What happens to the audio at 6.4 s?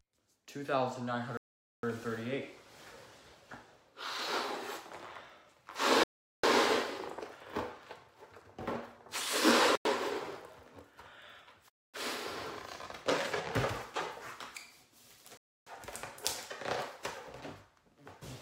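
At 6.4 s the sound comes back after a 400 ms dropout starting at 6.04 s. This is likely a Bluetooth stall: delayed packets emptied the receiver's buffer.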